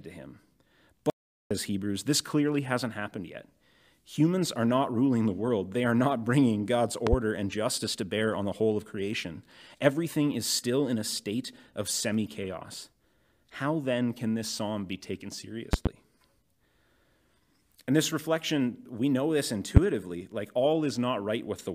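At 1.1 s the speech cuts out abruptly and returns at 1.51 s. This is an audio dropout to silence, likely from the input briefly losing its connection while recording continued. About 0.41 s of speech is lost. Unlike a pause or noise gate, the gap is silent with no room tone.

A loud pop follows at 7.07 to 7.16 s as two quick bursts standing roughly 20 dB above the speech. It was likely caused by a voltage spike from a plug, switch or static. Another double pop of similar strength occurs at 15.73 to 15.89 s, and a single louder one, around 25 dB up, at 19.77 to 19.80 s. Unlike a dropout, the speech carries on underneath each pop.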